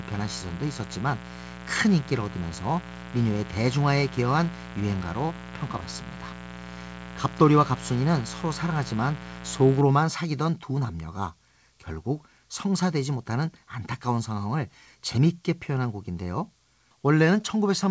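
From the start to 9.81 s, a mains buzz sits under the speech. Sharp switching spikes, as from a dimmer, rectifier or unshielded line, leak in twice per 60 Hz cycle, so harmonics of 60 Hz stack up into the kilohertz range. That produces a raspy, steady buzz, roughly 15 dB below the speech, rather than the smooth low tone of plain hum. Since the clip carries nothing above 8 kHz, consistent with a G.722 call path, the buzz's upper harmonics stop there too.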